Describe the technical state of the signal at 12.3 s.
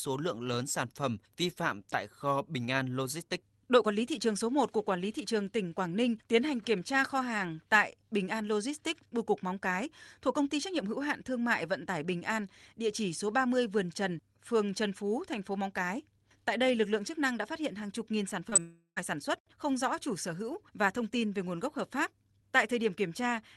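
At 12.3 s the speech is intact, with no fault to be heard beyond the ordinary coding character of the call path it travelled through.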